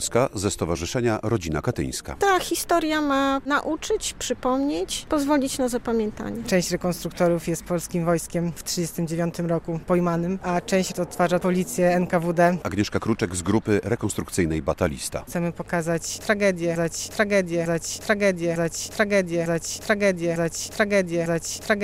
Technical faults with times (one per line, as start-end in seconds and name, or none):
16.76-21.84 broken-record loop